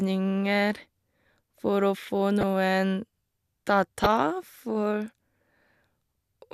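At 2.41 to 2.43 s and 4.04 to 4.06 s, a corrupt frame decoded with damaged bits sprays misplaced energy, giving a brief chirping burst. The second burst spans about two frames and is much louder.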